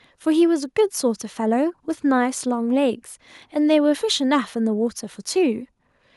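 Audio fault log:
Nothing to log here, as no faults turn up anywhere in this bit of speech.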